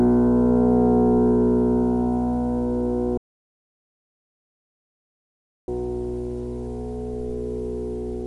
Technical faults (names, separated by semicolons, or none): audio dropout to silence